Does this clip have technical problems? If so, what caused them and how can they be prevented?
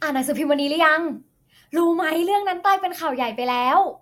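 No, this clip has no technical problems, so there is nothing to prevent.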